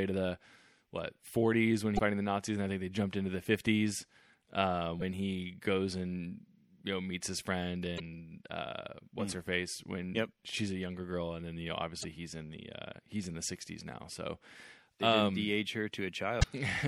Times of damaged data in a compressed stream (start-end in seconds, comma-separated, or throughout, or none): 1.95-1.99, 4.98-5.02, 7.96-8.00, 12.01-12.05, 16.39-16.44